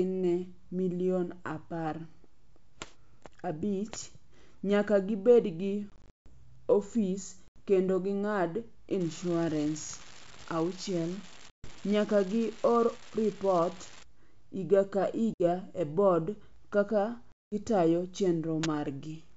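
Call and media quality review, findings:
Packet loss on an ADPCM call: silent gaps at 5.90–6.30 s after "nyaka gibed gi", 7.48–7.63 s before "kendo ging'ad", 11.50–11.70, 15.34–15.42 and 17.32–17.54 s. Decoder predictor desyncs, causing slightly distorted speech on resume.

Unreliable data bit: steady crackle at 9.00–14.03 s, starting after "kendo ging'ad" and continuing through pauses. One marginal data line flips a bit, giving equal-size spikes. G.722 path at 64 kbit/s is clean.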